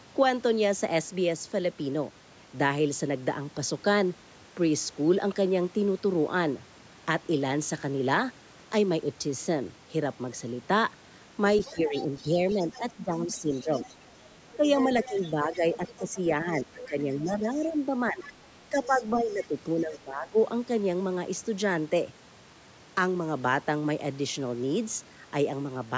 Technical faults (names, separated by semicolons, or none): other side's voice leaking through; speech suppressed in double talk